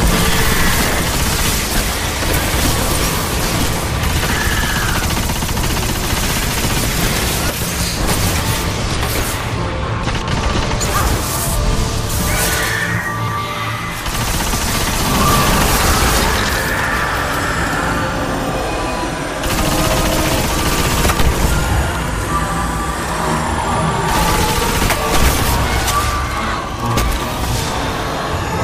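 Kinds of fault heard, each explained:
Chunks out of order: a 93 ms block of audio plays late, after material that should follow it. Nothing's missing, but the order is jumbled, with hard joins. It happens at 4.37–4.55 s and 13.19–13.38 s (one block late) and 10.03–10.31 s (two blocks late).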